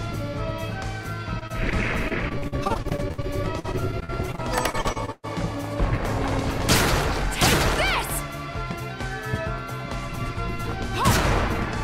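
From 1.39 to 5.25 s, repeated packet loss chops the audio into dozens of dropouts, some up to 118 ms. Concealment stretches the preceding sound, producing a choppy texture with pieces missing.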